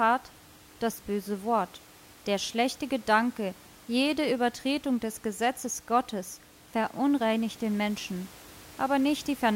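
Nothing here goes wrong on the technical side; the speech carries a faint bed of room noise sitting about 24 dB below it, which is simply part of the space it was recorded in.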